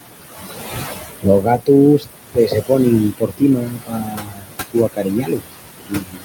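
Noise suppressor artifacts run through the whole clip: the suppressor pulls the room noise down by about 17 dB.

Speech cut by the noise suppressor, where speech is mistaken for background noise, occurs at 0.86–1.26 s, 1.42–1.68 s, 1.99–2.08 s, 2.33–2.71 s and from 3.11 s to the end. In the first four, short stretches of a tenth to a fifth of a second drop by about 16 to 20 dB. From 3.11 s onward, drops reach about 22 dB and leave consonants and word endings faint or swallowed. The room noise, about 8 dB under the speech, is part of the recording.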